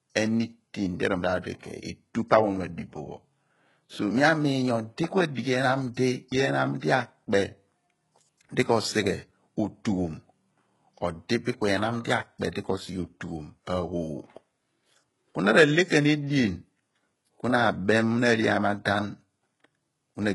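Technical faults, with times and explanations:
Throughout, HE-AAC compression. The treble sounds rebuilt rather than recorded, with gritty, lispy s sounds and nothing above 11.5 kHz. This is likely spectral band replication, copying lower bands upward, at a heavily damaging bitrate that fits about 12 kbps.
6.80 to 6.83 s, pre-echo. A short hiss runs for about 29 ms before a sharp speech attack, which sounds softened and smeared. The codec spread noise meant for the loud onset across its whole block, including the quiet moment before it.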